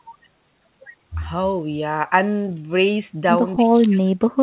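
Speech over a narrowband call path with nothing above 4 kHz, which fits a G.711-type codec. From 3.55 s to the end at 4.43 s the talker drops by roughly 40 dB, likely speech suppressed in double talk, where the echo canceller cannot separate the near voice from loudspeaker echo and attenuates both.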